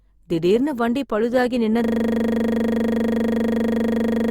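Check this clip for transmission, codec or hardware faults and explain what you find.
There's one fault: a system hang loop. From 1.84 s, right after "திடீர்னு வண்டி பழுதாகி", a 40 ms slice repeats to the end, 25 times a second, as the frozen ring buffer cycles.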